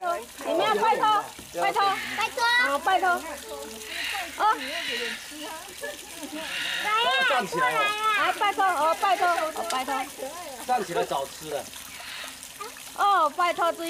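No dropouts, distortion, clicks, level jumps or timing errors can be heard anywhere in the recording.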